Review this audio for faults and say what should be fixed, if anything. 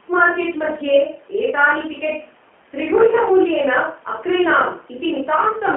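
Throughout the speech, G.729 codec damage is plainly audible. Each 10 ms frame is rebuilt from a few pulses through a filter, giving a rough, synthetic texture that fits an 8 kbit/s codec. A spectrogram shows energy only between 200 Hz and 3.4 kHz, with nothing above. To prevent this, record or route the call through a wideband or higher-bitrate codec instead of narrowband G.729.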